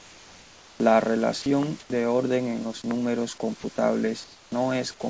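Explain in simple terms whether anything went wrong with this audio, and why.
Yes, several things went wrong, mostly around how the call link handled pauses.

Comfort noise in place of the background: the sending side likely stopped transmitting whenever it decided no one was talking, and the receiving side filled the gap with made-up hiss. From the start to 0.8 s, from 1.8 to 1.9 s, and from 4.24 to 4.52 s, the natural room background is replaced by a flat, featureless noise that is a little quieter than the real room, so the background seems to dip and turn artificial.

Onset clipped by the voice detector: the same speech detector was likely slow to notice that talking had resumed, so the very first sliver of sound never got sent. At 0.77 to 0.80 s and at 1.88 to 1.90 s, about 30 and 20 milliseconds are missing. The speech jumps in abruptly, as though its soft start had been snipped off.

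Sound dropped by the voice detector: here the detector likely mistook a quiet bit of speech for background and briefly stopped sending. From 1.42 to 1.46 s and from 3.60 to 3.64 s, short stretches of speech are swapped for the same synthetic hiss, so the sound briefly thins out or vanishes before returning.

Loud pop: a sudden electrical jolt, likely from a connection, switch or driver hiccup, was added on top of the audio. At 1.63 s and again at 2.91 s there is a single sharp click, the second one clearly stronger, while the speech carries on underneath without interruption.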